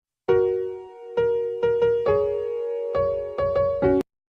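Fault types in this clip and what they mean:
Nothing here needs calling out; no dropouts, glitches or other technical faults turn up anywhere in the clip.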